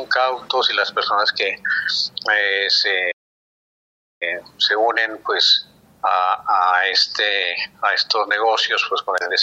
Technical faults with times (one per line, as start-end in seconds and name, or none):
3.11-4.23 playback stall